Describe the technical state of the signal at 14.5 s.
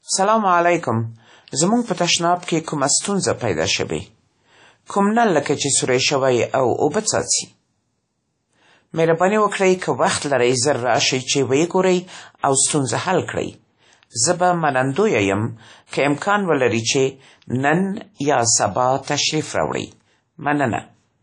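At 14.5 s the speech sounds washy and ringing, with hiss pumping along and nothing above 10.1 kHz, as throughout the clip, likely WMA compression at roughly 32 kbps smearing quantisation noise and discarding weak components.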